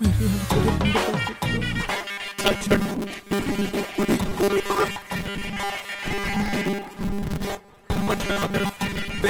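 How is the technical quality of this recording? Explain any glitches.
The recording turns rough partway through. From 1.86 s to the end, the sound becomes a rigid, metallic buzz at 200 Hz, a robotic sound from repeated short buffers. The likely cause is delayed incoming audio, with the software looping a 5 ms slice for most of that stretch and skipping real material, which imposes a buzz at that fixed rate.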